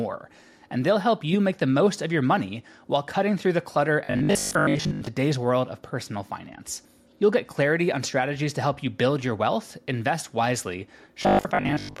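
From 4.05 to 5.07 s and from 11.23 to 11.99 s, the speech turns into a rigid, metallic 50 Hz buzz that loosely follows the words. This robotic sound from repeated short buffers likely comes from starved playback looping 20 ms chunks while most of the real audio is skipped.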